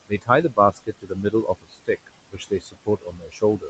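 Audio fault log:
Throughout: noise suppressor artifacts. The background is pulled down by about 21 dB frame by frame, so it sinks in pauses and swells back under speech. The level follows the sound rather than cutting cleanly, unlike a dropout.
0.07–0.29 s, 0.50–1.89 s, 2.29 s to the end: speech cut by the noise suppressor. Quiet parts of the speech were taken for noise and lowered by about 21 to 22 dB, around 150 ms and half a second in the first two spans. Soft consonants and endings sound swallowed.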